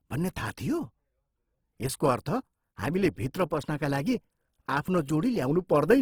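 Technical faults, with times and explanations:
Throughout, Opus compression: the speech sounds grainy and rough, with noise-like texture in place of clean harmonics. Bands stay filled rather than hollow, so there's little swirl, and content still reaches about 20 kHz. This likely reflects Opus in CELT mode near 16 kbps.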